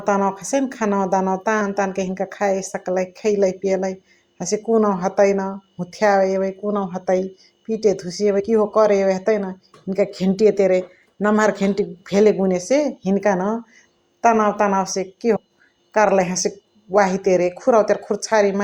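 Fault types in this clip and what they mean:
Compressed frames skipped: at 1.6, 8.39 and 15.35 s the speech lurches forward, dropping roughly 50 to 100 ms each time. Whole frames of the coded stream went undecoded, and the jumps fit 24 ms frames.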